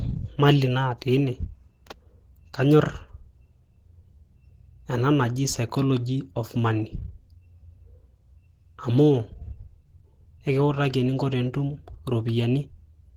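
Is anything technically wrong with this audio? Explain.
Yes. Opus compression runs throughout the clip, most likely from a low-rate encode that fits about 16 kbps in hybrid speech mode. With so few bits, detail is coarsely modelled, so the speech sounds hoarse, grainy and plainly degraded even though content reaches about 20.1 kHz.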